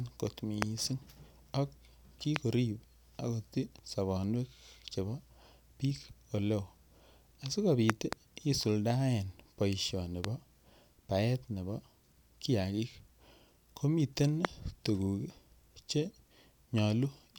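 Loud pops break through the speech five times. The first is at 0.62 to 0.64 s and the second at 2.36 to 2.38 s. From 7.90 to 8.15 s comes a quick double pop, just before "isuldoen boisioni bo". Another is at 10.25 to 10.27 s, right after "isuldoen boisioni". The last is at 14.45 to 14.47 s. Each is a sharp thump, about 20 to 25 dB above the speech. The speech carries on underneath. The likely cause is a voltage pulse from a switch, plug, static or driver glitch.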